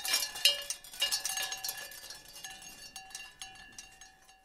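Nothing technically wrong turns up anywhere in this short recording of sounds, so there's no fault to point to at any moment.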